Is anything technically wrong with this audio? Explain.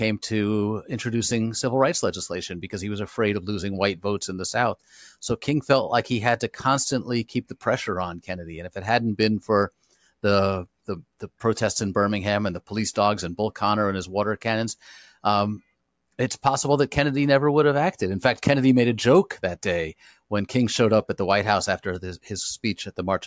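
No, no technical faults heard.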